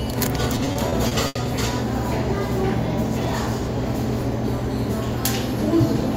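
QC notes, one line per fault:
0.55–1.37 s, repeated stalls (stutter): seven brief hold-ups, longest 80 ms, stretch and smear the sound. Late packets drained the jitter buffer, so sound was extended without loss.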